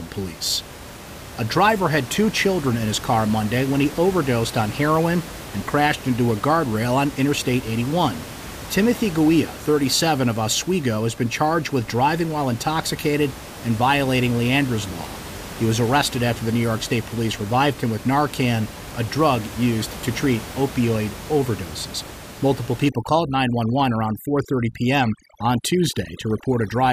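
Speech with room noise about 15 dB below the voice. From 22.89 s to the end, overdone noise removal suppresses bands near the noise floor. The background drops and breaks up into twinkling specks.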